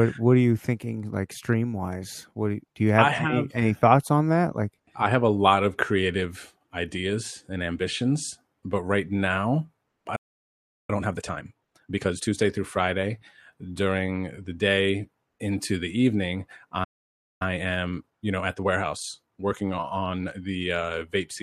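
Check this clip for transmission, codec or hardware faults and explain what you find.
The speech in this clip has two playback interruptions, each followed by a hurried stretch where the player catches up.

A playback stall occurs from 10.15 to 10.90 s (about 0.73 s) and again from 16.84 to 17.42 s (about 0.56 s). Speech halts mid-flow into silence, likely because the player ran out of buffered data or its thread was blocked. The waveform drops to a flat line, and the spectrogram shows an empty vertical band.

Time-compressed catch-up follows each stall: 10.90 to 12.34 s at 1.5× speed, and 17.42 to 20.42 s at 1.15×. The player shortens its backlog by cutting small pieces and cross-fading the joins, so speech sounds rushed but keeps its normal pitch. On the spectrogram, harmonics stay at the same heights while syllables are squeezed closer together.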